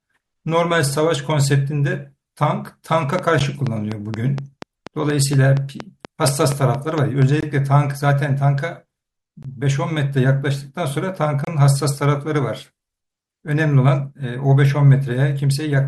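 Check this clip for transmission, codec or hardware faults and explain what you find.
Two faults are audible in this speech clip: a train of clicks and a series of gaps between stream segments.

Train of clicks, 3.19 to 7.23 s. About twenty near-identical clicks arrive at a steady 4.2 per second. They stand roughly 10 dB above the speech. They tick through the pauses as well as the talking, so they sit on top of the signal rather than coming from it. A repeating pulse like this is likely interference from nearby equipment or a faulty connection or power supply.

Gaps between stream segments, at 3.39 s, then 7.41 to 7.43 s, 9.43 to 9.45 s and 11.45 to 11.47 s. They fall 4 s, then 2 s and 2 s apart, which fits a stream built from 2-second segments. The segment timestamps don't quite meet, and the player fills each shortfall with silence. The added time runs from 12 ms to 28 ms. Each gap is a hard-edged dropout in the speech, but no audio is lost.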